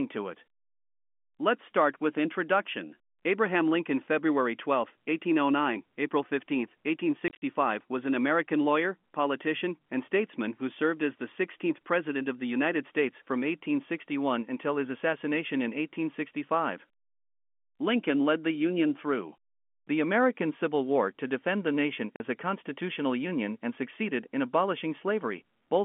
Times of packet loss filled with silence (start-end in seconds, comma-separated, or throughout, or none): 7.28-7.42, 22.16-22.20